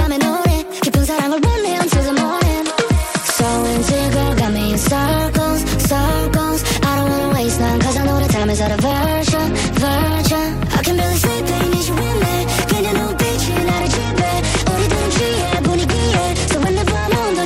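Bluetooth SBC bit pool drops at 1.32–5.20 s, 7.43–10.18 s and 13.74 s to the end. The treble dulls and gritty noise rises, which fits the bit pool falling from 31 to 11 on a congested link.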